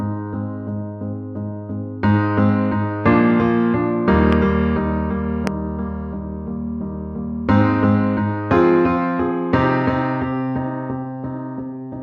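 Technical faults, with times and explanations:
4.33–4.35 s and 5.47–5.49 s, loud pop: two single sharp pops stand well above the surrounding sound, which continues underneath. Each is likely a voltage pulse from a switch, plug or static, appearing as a thin, tall waveform spike and a full-height vertical spectrogram stripe.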